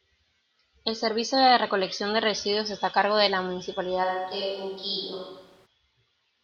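A switch to a distant microphone runs from 4.05 s to 5.65 s. The speech abruptly turns roomy and hollow, with thinner bass, and room noise becomes audible at roughly 30 dB below the speech, while the overall level stays about the same. At 5.65 s the close, full sound returns just as suddenly. The likely cause is that the close microphone's signal dropped out, leaving a pickup farther from the talker carrying the audio for that stretch.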